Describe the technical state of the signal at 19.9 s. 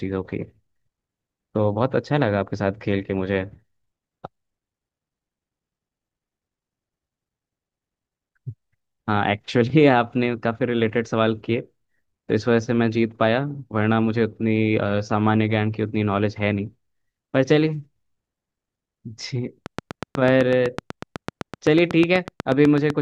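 At 19.9 s the speech sits under a train of clicks that runs from 19.66 s to 22.91 s: sharp, near-identical pulses at a steady 8 per second, some thirty in all, peaking roughly 10 dB above the speech and audible as regular ticking. The likely source is electrical interference or a faulty connection or power supply. On a waveform they show as evenly spaced spikes; on a spectrogram, as thin vertical broadband lines.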